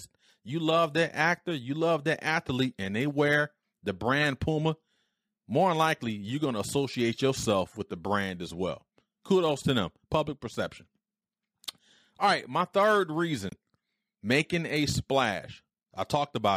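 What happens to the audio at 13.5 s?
A corrupt frame decoded at 13.49 to 13.53 s, just after "right my third". A few compressed frames arrived with flipped bits, and the decoder played them anyway. Misread codes and gains put energy at frequencies where the speech had none, for roughly the length of those damaged frames. The result is a brief, fairly quiet chirp or blip of noise, peaking somewhere around -30 dBFS, that lasts about 40 ms.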